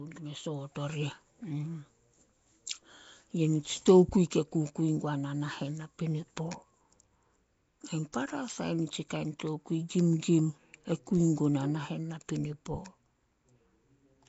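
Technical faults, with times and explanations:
throughout Nellymoser compression: The speech likely passed through the Nellymoser Asao codec, at a rate that fits 32 kbps. Its fixed bit budget drops weak bands and fills them with noise, leaving a plainly gritty, hiss-laden fringe, a blurred, submerged character, and nothing above 7.7 kHz.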